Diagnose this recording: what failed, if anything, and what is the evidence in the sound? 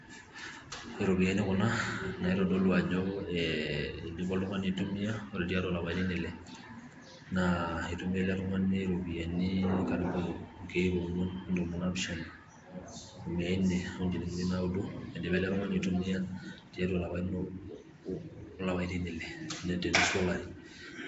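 Codec stage: the speech carries a rough, hissy halo and a smeared, underwater quality for the whole clip, which points to likely Nellymoser compression at a low rate such as 32 kbps. Weak bands are replaced with noise. On a spectrogram there is nothing above 7.7 kHz, with speckled noise filling gaps between harmonics.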